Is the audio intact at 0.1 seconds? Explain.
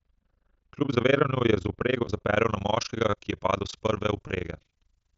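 No. At 0.1 s two faults are present. Overlap-add ripple runs through the whole clip. The speech was split into windowed frames and rejoined with an overlap whose window gains don't add up to a constant, so the level dips and recovers once per frame. Here the swing is deep, about 60 dB, and repeats around 30 times a second. That gives the speech a coarse, rough flutter, like a fast tremolo chopping through it.

De-emphasis applied wrongly covers 0.0 to 2.36 s, so it affects this moment too. A treble-reducing filter, intended to reverse a pre-emphasis boost that this speech either never received or had already had undone, tilts the spectrum steadily downward with frequency. At 10 kHz the response sits about 13 dB below its level at 1 kHz. The speech therefore sounds dull and muffled, with consonant sibilance and airiness noticeably subdued, and the flutter is layered on top of that darkened tone.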